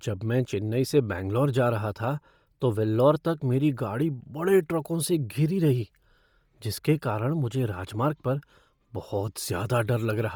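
Throughout, the speech carries a heavy grainy, breathy edge, likely from Bluetooth LC3 compression refilling emptied highs with noise. Nothing remains above 20.2 kHz.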